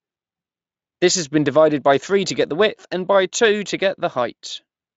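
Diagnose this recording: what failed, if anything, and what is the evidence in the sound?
Nothing failed; no fault is audible in this recording.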